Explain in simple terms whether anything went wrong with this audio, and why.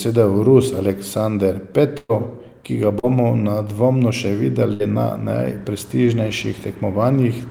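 A couple of things went wrong. There are two bursts of packet loss: at 1.97 to 2.11 s, just before "ki ga", about 120 ms of audio went missing, and at 4.73 to 4.82 s, right after "nedvomno še", about 60 ms more. Each time the receiver stretched the last sound and faded it, ending with a brief silence in the first case, before jumping ahead.

There's also a short concealed packet loss at 2.99 to 3.05 s, between "ki ga" and "nedvomno še". Roughly 40 ms arrived too late, and the gap was patched by continuing the previous sound, so you hear a quick smear rather than a clean gap.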